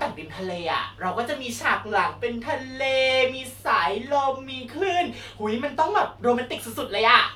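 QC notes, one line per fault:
No fault found.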